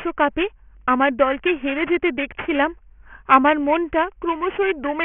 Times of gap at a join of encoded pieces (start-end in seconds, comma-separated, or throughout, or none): none